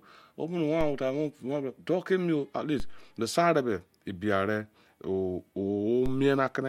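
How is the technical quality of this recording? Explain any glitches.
The recording has three glitches, all of the same kind. DC steps occur at 0.81, 2.80 and 6.06 s. At each, the waveform's zero line suddenly jumps to a new offset, which then drains away as though through a high-pass around 2 Hz. Each jump is heard as a low thump or click while the speech carries on unchanged.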